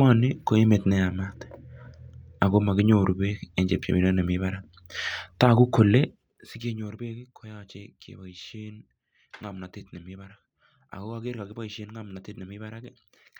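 Around 5.98 s the speech gets pulled down by something like 15 dB, and instead of gliding, the drop comes in discrete jumps, roughly a hundred a second, right through to 6.97 s. That's classic zipper noise: the gain gets updated once per block with no smoothing between values, so every jump leaves a tiny click. Strung together they make a fine buzzy ticking that rides on the speech for that whole second while the level slides down.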